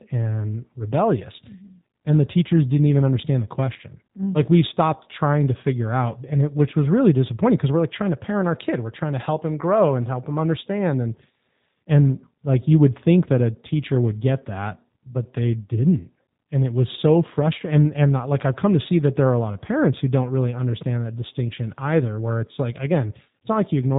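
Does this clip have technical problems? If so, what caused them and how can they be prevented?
Yes. G.729 codec damage runs throughout the speech. It is rebuilt from a vocal-tract filter, pitch predictor and pulses, so it sounds rough and synthetic, which fits an 8 kbit/s G.729A link. A spectrogram shows a hard ceiling at 4 kHz. Negotiating a wideband codec such as Opus prevents it.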